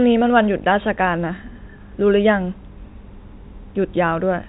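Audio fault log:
Nothing stood out on listening to this speech.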